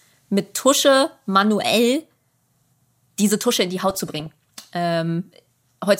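From 3.90 to 4.74 s, just after "in die", weak reception lets bit errors (a few per thousand) slip past error correction into the MP2 data. Corrupted scale factors make single sub-bands jump in level for up to a frame. This DAB burbling puts short blips of noise over the speech.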